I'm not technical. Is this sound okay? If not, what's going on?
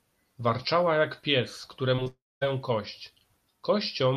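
No. Around the two-second mark, at 1.95 to 2.00 s and again at 2.04 to 2.08 s, the speech gives two quick smears, like tiny wobbles. These are short concealed packet losses. About 20 milliseconds of the call arrived too late each time, so the receiving end patched each gap by stretching the last bit of sound and then blending back into the real speech.

Right after, from 2.08 to 2.43 s, the speech turns into a fading buzz or hiss that dies away to near silence for roughly a quarter of a second before speaking resumes. About a third of a second is simply gone. This is most likely a long network dropout: the connection stopped delivering sound, the receiver briefly extended the last sound, then had nothing left to play until the audio came back.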